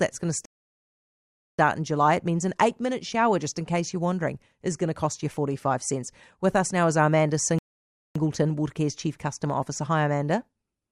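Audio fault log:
0.45–1.59 s and 7.59–8.16 s, rebuffering stall: the speech cuts to dead silence twice, first right after "going to", and resumes from the exact point where it stopped. The player drained its buffer of downloaded audio and halted until more data arrived. The first stall adds 1.13 s and the second adds 0.57 s. Because playback pauses rather than skips, no material is lost. The only effect is inserted silence that stretches the timing.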